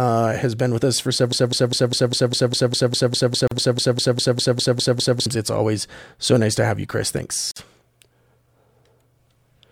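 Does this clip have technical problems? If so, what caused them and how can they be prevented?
Yes. After "been with us for", a broken-record loop runs from 1.32 to 5.26 s: a 200 ms fragment repeats exactly 19 times, and the speech meant for that span is lost. Unlike a brief stutter, the identical repeats go on for seconds. This most likely happened because the player or stream stalled and kept resending its last buffer. Watchdog checks that detect stalled output and mute or resync it would prevent this.

A gap at a join of encoded pieces opens at 3.47 s for about 40 ms and at 7.51 s for about 49 ms, four seconds apart. The edges are smeared, and the sound resumes where it stopped, which sets these gaps apart from a dropout that loses audio. Trimming encoder delay and padding, or using gapless encoding, would prevent this.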